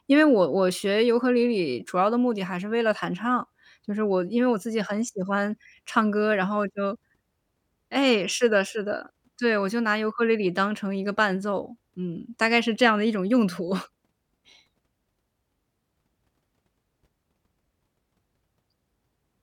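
No technical faults can be heard anywhere in the recorded speech; the signal holds steady and continuous for its whole duration.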